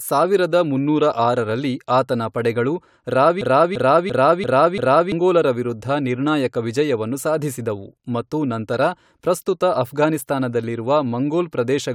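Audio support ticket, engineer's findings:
System hang loop, 3.41 to 5.12 s. A 341 ms speech fragment repeats five times, about 2.9 Hz stutter. Driver froze, ring buffer cycled, which fits a 16384-sample buffer. About 1.5 s lost.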